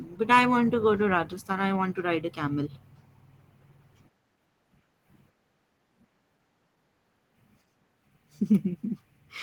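Opus voice compression runs through the whole clip, and its coarse coding points to a low bitrate of around 16 kbps. The coder is in hybrid mode, so a linear-prediction layer handles the speech below 8 kHz while a separate transform layer thinly covers the band above it. The full band survives, but the excitation is coded too sparsely, so the speech sounds plainly hoarse and slightly robotic, coded in 20 ms frames.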